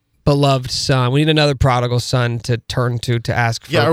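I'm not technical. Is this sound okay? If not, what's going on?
Yes, nothing is wrong with this speech recording. There are no problems to point out anywhere in it.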